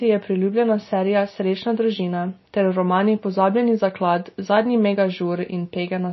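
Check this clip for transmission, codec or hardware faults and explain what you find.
One codec fault runs through the whole speech clip: MP3 compression, likely, at plainly audible damage. With the treble cut off above 5.8 kHz and weak spectral detail dropping in and out between frames, the speech sounds dull and watery, with swirling sibilants, which fits a low bitrate around 24 kbps.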